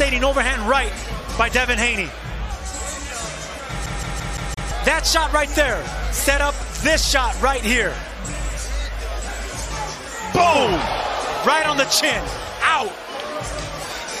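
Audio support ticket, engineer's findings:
CD stuck on one turn, 3.86 to 4.71 s. The same 0.17 s of sound plays five times at an even rate, with a short mute at each jump. Scratch on the disc likely throws the laser back one track every rotation. The fixed loop length separates it from irregular dropouts.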